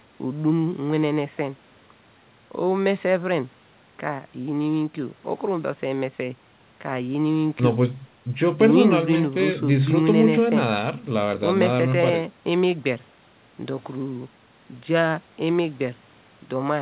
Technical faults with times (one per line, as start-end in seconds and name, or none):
none